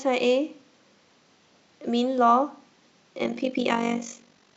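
From 3.24 s to the end, the speech takes on a robotic flutter near 50 Hz, about 11 dB deep. This is overlap-add ripple: the overlapping frames don't sum to constant gain.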